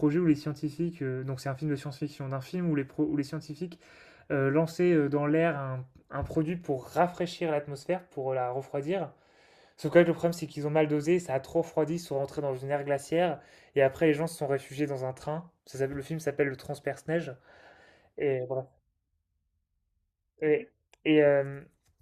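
Speech recording with no audible technical faults anywhere in the clip.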